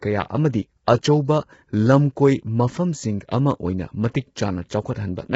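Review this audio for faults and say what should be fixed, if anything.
Throughout the speech, a low-bitrate, short-frame codec, likely low-delay AAC compression at around 16 kbps, is starving the voice of bits. Harmonics blur into rough, grainy noise, and nothing remains above 7.7 kHz, so the top band sounds dull and thin. Encoding at a higher bitrate, or with a longer-frame codec where latency allows, would prevent this.

From 0.85 to 0.88 s, the transform codec spreads quantisation noise across a block that contains a sharp attack near its end. The result is pre-echo: a brief hiss of about 26 ms fills the quiet before "ꯑꯆꯧꯕ ꯂꯝꯀꯣꯏ" and smears its onset. Enabling block switching or temporal noise shaping, or raising the bitrate, would prevent it.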